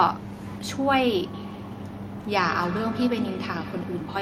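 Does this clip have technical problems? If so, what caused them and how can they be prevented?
Yes, there's feedback echo between two devices from 1.33 s to the end: the speech keeps coming back roughly every 150 ms, peaking at about 11 dB below the talker. A second device in the room replays the call, this mic catches it, and its canceller can't remove another device's playback. Mute or headphone one device.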